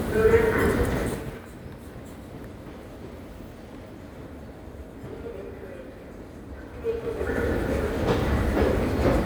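From 6.66 to 7.51 s there's zipper noise: the level changes by roughly 15 dB in raw 3 dB jumps, around seven a second, with no smoothing. Each jump clicks, so the move ticks audibly.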